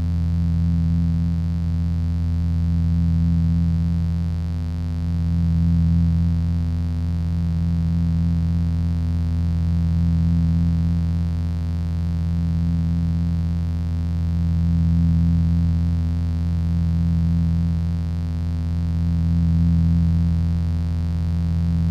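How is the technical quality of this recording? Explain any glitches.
The recording carries a constant mains buzz across its whole length. Sharp switching spikes from a dimmer, rectifier or unshielded connection enter twice per cycle of the 50 Hz supply, spreading harmonics into the kilohertz range. The result is a steady, raspy buzz sitting roughly 20 dB below the wanted sound.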